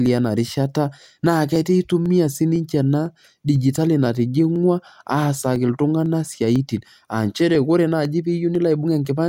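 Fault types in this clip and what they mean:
Periodic USB or driver dropouts: something keeps stalling the USB bus or audio driver every 0.5 s, and each time about half a millisecond of speech just gets skipped. You hear it as a steady tick, around twenty of them from 0.06 s to 9.05 s.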